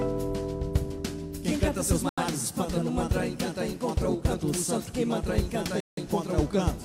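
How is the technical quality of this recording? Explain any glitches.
The recording has two dropouts. At 2.09 s and again at 5.80 s there's a block of digital silence, about 85 ms and then 170 ms long, which fits buffers of 4096 and 8192 samples not being filled in time. The audio snaps to zero and back with no fade, so each gap is a short hole.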